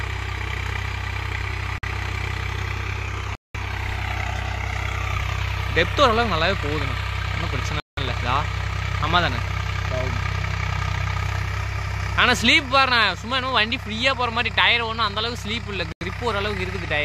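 The audio cuts to brief silence at 1.78, 3.35, 7.80 and 15.92 s, for 50 to 195 ms each, before resuming. These are likely Bluetooth stalls, where the headphone buffer ran dry.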